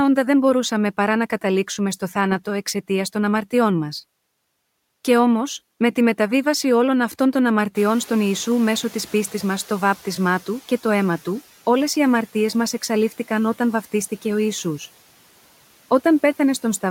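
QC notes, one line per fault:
7.75–10.52 s, noise suppressor catching up: room noise jumps near 8 s and leaks through. The suppressor's estimate lags 2.77 s, then cuts it about 7 dB.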